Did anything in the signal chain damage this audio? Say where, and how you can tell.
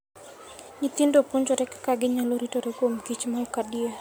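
No, nothing in the signal chain has audibly damaged this speech recording, and the signal holds steady throughout with no sign of trouble at any stage.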